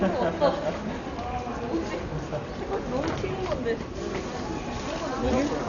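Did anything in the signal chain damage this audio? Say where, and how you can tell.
Yes. Throughout, the sound is dull, with nothing above 6.9 kHz, and tonal parts carry a rough, fluttering noise. That points to the codec stage, likely Dolby Digital compression at a low bitrate of around 48 kbps, where unfunded frequency lines are refilled with dither noise.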